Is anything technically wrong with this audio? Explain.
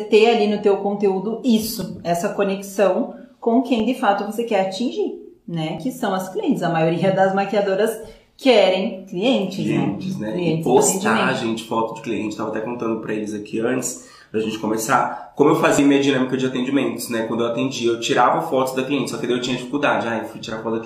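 Yes. Overlap between stream segments at 1.81, 3.80, 5.78, 10.78 and 15.79 s: overlapping timestamps at one-second segment boundaries cut about 30 ms, so the waveform jumps.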